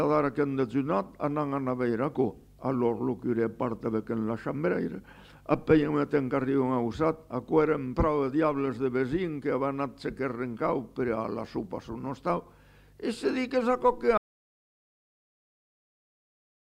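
At 14.18 s the sound cuts off abruptly into dead digital silence, with no room tone, and stays silent for the last 2.48 s. This is an audio dropout to silence, likely from the input being lost while the recorder kept writing silence.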